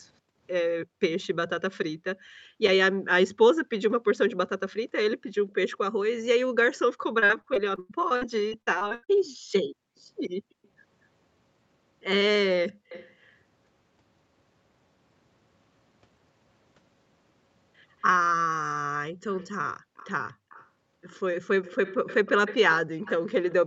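From 0.21 to 12.89 s the room background is gated by the echo canceller. It clamps the microphone while the far end plays, so the ambience keeps dipping, by up to about 40 dB, for roughly two seconds in total, then swells back.

Between 4.29 and 5.52 s there's an echo leak: a faint copy of the voice trailing 235 ms behind, about 25 dB down. That's likely a speakerphone on the other side whose canceller didn't scrub out everything its mic caught.

From 7.19 to 9.10 s repeated packet loss gives a robotic chop. Short holes keep arriving, the longest 99 ms, and each gets patched by stretching the last sound, so about a quarter of that stretch is concealment.

The echo leak returns at 10.64 to 13.33 s, now about 20 dB down, and again from 18.00 s to the end at about 15 dB down. The 235 ms delay stays the same and it gets steadily easier to hear.

One more brief gating dip lands at 19.80 to 19.96 s, about 37 dB deep.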